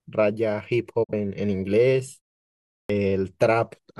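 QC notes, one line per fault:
1.03–1.13 s, digital broadcast dropout: the speech fades out over about 20 ms into a short hole, then picks up again. Roughly 43 ms of speech is simply gone, which fits the receiver muting over a single bad frame until clean frames arrived.
2.84–2.90 s, clipped start after a pause: after a 0.71 s pause the speech comes back abruptly, missing its first 55 ms or so. The output seems to have dozed off in the silence and needed that long to wake before it passed sound again.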